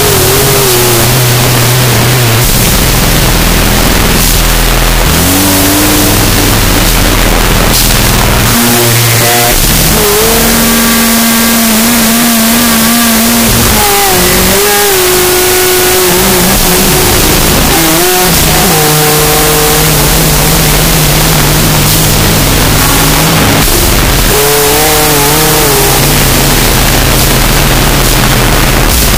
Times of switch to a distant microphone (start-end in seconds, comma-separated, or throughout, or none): none